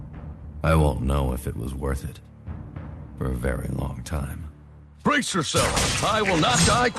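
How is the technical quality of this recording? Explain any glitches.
No glitches or faults stand out; the audio sounds like a normal call connection, with the Opus codec at 40 kbps limiting the top end to around 12 kHz.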